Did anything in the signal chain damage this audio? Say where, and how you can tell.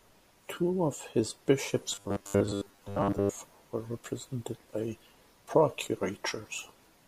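Yes: robotic sound from repeated short buffers between 1.92 and 3.37 s, with the speech turning into a rigid, metallic buzz at 100 Hz. That pitch points to a 10 ms segment looping, most likely because the driver or buffer ran short and kept repeating its last block.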